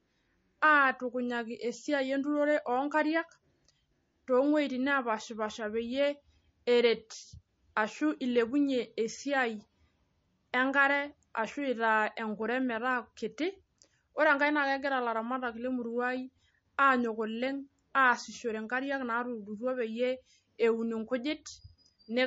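A speech recording with MP3 compression damage from start to finish. Nothing is heard above 7.6 kHz. The treble is simply gone, so s sounds lose their edge. The damage is plainly audible. This is likely a low-bitrate MP3 encode, and the sound fits a rate near 34 kbps. At that rate the encoder cannot fund every frequency band. It drops the top end at a fixed cut-off. It also throws away weaker detail, and that loss is what we hear.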